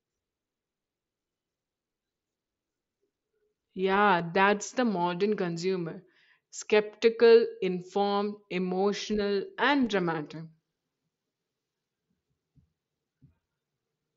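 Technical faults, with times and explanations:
4.19 s and 9.86 s, concealed Bluetooth headset packet loss: At each point, about 7.5 ms of audio, consistent with one lost packet on the headset link, goes missing. The receiver fills the gap by repeating the closest-matching recent stretch of waveform, so the join passes almost unnoticed. Through the mSBC wideband path, the speech carries its light graininess and a top end limited to 8 kHz.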